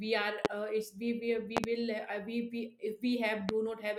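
Loud pops hit at 0.45 to 0.48 s, 1.57 to 1.67 s (a double pop) and 3.49 to 3.52 s. Each is a sharp crack roughly 25 dB above the speech, which carries on underneath. A sudden voltage spike, likely from a switch, plug or static discharge, is being added to the signal.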